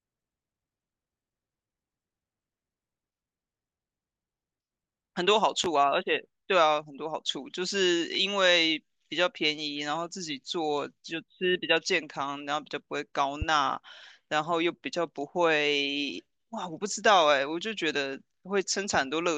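A sharp pop cuts across the speech at 5.64 s, well above the speech level, and a second, milder one at 13.42 s, each lasting about 35 ms while the speech continues beneath. These loud pops are likely voltage spikes from a plug, switch or static discharge.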